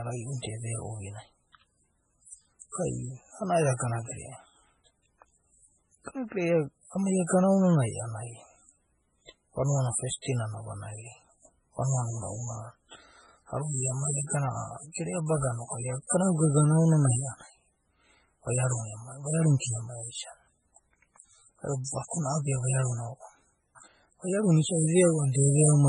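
Throughout the speech, heavy codec damage is audible: nothing is present above 10.4 kHz, and weak spectral detail flickers in and out between frames, giving a watery, swirly texture with smeared onsets. The likely cause is MP3 compression, consistent with a very low bitrate around 16 kbps.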